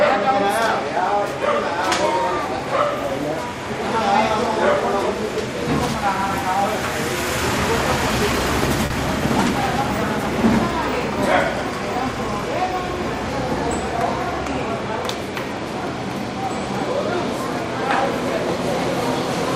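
At 8.86 to 8.92 s there is a short concealed packet loss. About 40 ms of audio never arrived, and the decoder filled the gap by extending the preceding sound before crossfading back. It is heard as a brief smear. On a spectrogram the band looks stretched and blurred, with a soft seam where real audio resumes.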